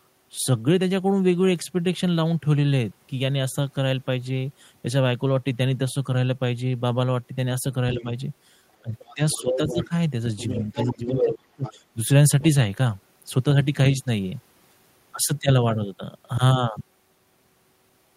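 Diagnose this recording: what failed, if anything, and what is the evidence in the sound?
In call processing, the echo canceller likely failed to subtract the loudspeaker signal fully, so the other side's voice leaks through at 7.93–8.04, 8.99–9.87, 10.37–11.72 and 12.41–12.45 s. It ranges from faint scraps to a second voice almost as loud as the main talker around 11 s.

The same echo canceller likely misjudged double talk, treating the talker as echo and ducking everything, so speech is suppressed in double talk at 7.95–8.06 s (a slight dip), 8.82–9.92 s (deeper), and 10.75–11.95 s (a deep drop of around 25 dB), each coinciding with the leak.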